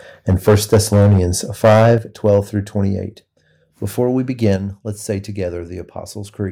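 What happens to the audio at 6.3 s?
Nothing goes wrong at 6.3 s; the audio continues cleanly through that moment with no audible fault.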